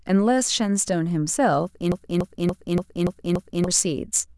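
From 1.92 s to 3.68 s the speech sticks on one 0.29 s fragment, repeated exactly six times back to back: a broken-record loop. A stalled player or stream likely kept resending its last fragment, so the audio due then is lost.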